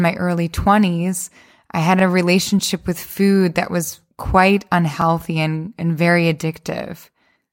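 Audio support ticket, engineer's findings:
Overlapping chunks: short stutter at 1.99–2.02 s, after "I had", and at 5.02–5.04 s, after "food that was quite". About 21 ms replayed at each join, 3.0 s apart. Chunking stage starts each block before the previous one ends, duplicating the seam.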